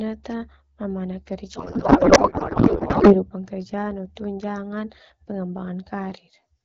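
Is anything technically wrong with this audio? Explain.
Yes. From 1.55 to 3.24 s, just before "kerja no tunjangan", there is a codec payload misread. The speech gives way to garbled noise and warble that barely tracks it. The sound points to octet-aligned AMR-WB frames being unpacked as bandwidth-efficient, so every field lands in the wrong place.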